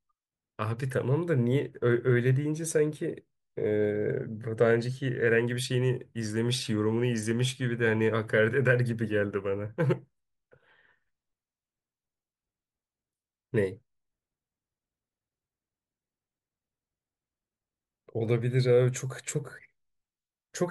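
Nothing stood out as a technical fault on listening through this speech recording.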